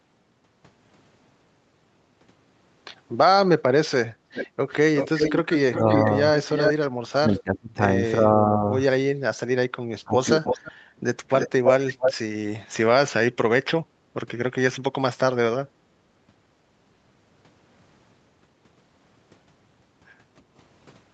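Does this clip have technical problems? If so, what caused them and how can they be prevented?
Yes. There are three kinds of fault.

Background gated by the echo canceller: from 4.13 to 4.27 s the room sound dips by about 9 dB, then returns. Unlike the double-talk cuts, no speech is lost, only the background. Gentler suppression settings in the echo canceller would prevent it.

Echo leak: delayed copies of the speech come back at 4.34 to 6.73 s, 7.39 to 7.58 s, 10.44 to 10.72 s and 11.37 to 12.14 s. The delay is 378 ms at first and 326 ms later, which is far too long for room reverberation. The copies are about 20 dB down at 7.39 s, about 5 dB down elsewhere, and as loud as the speech at 11.37 s. This is likely a far-end loudspeaker whose echo canceller failed to remove what its microphone picked up. A headset, or lower loudspeaker volume at that end, would prevent it.

Speech suppressed in double talk: the speech drops by roughly 25 dB in pieces from 7.08 to 8.71 s and from 10.04 to 10.48 s, likely because the other side talks at the same time. 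Unlike the background gating, the speech itself is lost. An echo canceller with better double-talk detection, or talkers taking turns, would prevent it.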